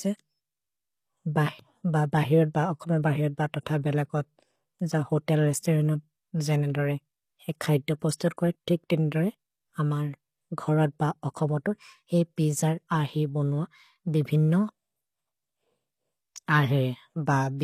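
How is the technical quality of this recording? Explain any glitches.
The speech carries audible low-bitrate codec damage throughout, plus two brief pre-echo smears just after 8 seconds.

Throughout, sibilants sound gritty and metallic and nothing reaches above 15 kHz. This is likely HE-AAC compression, at a rate that fits about 24 kbps, rebuilding treble from copied lower bands.

From 8.15 to 8.20 s, after "जेन् एन्दोरे ए खैद्दो", and again at 8.37 s, before "कोइ तिक्तिन्दोरे", pre-echo puts a short hiss ahead of attacks. Block-spread quantisation noise fills the quiet 55 ms and 15 ms before them, softening each onset.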